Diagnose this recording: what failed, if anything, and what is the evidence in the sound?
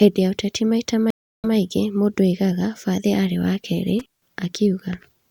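Network stage: a stream reconnect right after "ya ũteti maita," from 1.10 to 1.54 s. Sound drops for 0.33 s, then a fresh decoder resumes 0.1 s back, replaying a sliver.

Analogue wiring: an intermittent contact after "bathi arĩ wa keerĩ," 3.99 to 4.30 s. A loose connection opens the line for 0.14 s, with crackle at each edge and faint hiss between.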